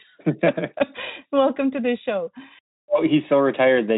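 No technical faults can be heard anywhere in the speech. It has passed through the Speex codec at a moderate bitrate, and any trace of that coding is faint at most.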